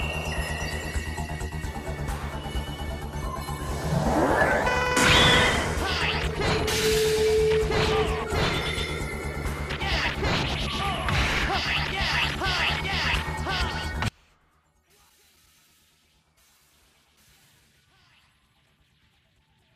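From 14.08 s to the end, one channel was likely inverted, its polarity reversed so the shared content cancels when the channels are summed to mono. The sound, background included, suddenly drops by about 36 dB, leaving only the residual difference between the two channels.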